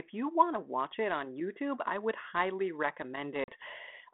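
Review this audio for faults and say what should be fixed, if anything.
Packet loss on the ADPCM call struck at 3.44 s. Roughly two packets, about 40 ms of audio, never arrived and were replaced with silence, leaving a hard-edged hole that ends near 3.49 s. ADPCM rebuilds each sample from its own running prediction and adaptive step size, so the gap knocked the decoder out of step with the sender. The speech returns with slight, brief distortion, settling within some tens of milliseconds. The G.726 path at 32 kbit/s, limited to 150 Hz to 3.5 kHz, shows only light codec damage. Preventing this needs packet loss concealment that resets the decoder's predictor and step size after a gap, together with a steadier network link.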